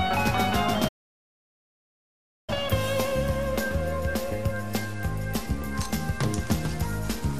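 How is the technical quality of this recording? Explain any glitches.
The recording has two clear technical faults: a gap of silence early on and a loss of quality near the end.

From 0.88 to 2.50 s the sound stops mid-flow for about 1.6 s and then carries on. This is a playback stall, likely caused by the player running out of buffered data or its thread being blocked, so nothing reached the output until it recovered. On a waveform this is a flat line between two stretches of normal signal. A spectrogram shows it as an empty vertical band across all frequencies.

From 4.79 to 7.33 s the treble goes dull and a gritty noise rises under the sound. This is a Bluetooth SBC bit pool drop. The pattern fits the phone cutting the bit pool from 31 to about 15, near 105 kbps, to keep a congested link alive. With so few bits the highest sub-bands get little or nothing, and the remaining bands are coarsely quantised. 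A spectrogram shows the upper region thinning or emptying for that stretch, with a grainy texture in the lower bands.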